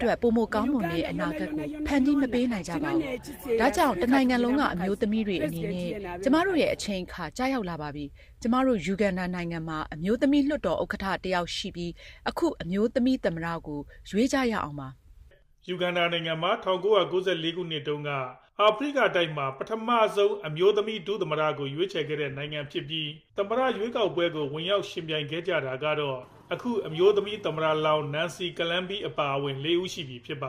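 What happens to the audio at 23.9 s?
At 23.9 s you're in the middle of a call bitrate drop running from about 22.06 to 26.85 s. The call's bandwidth estimate fell and the encoder was pushed to spend far fewer bits, and the sound fits a fall from roughly 64 kbps to around 15 kbps, bottoming out for about 2.5 s. With that little to work with, the coding gets coarse: the audio turns rough and watery, and the top end dulls until the rate climbs back.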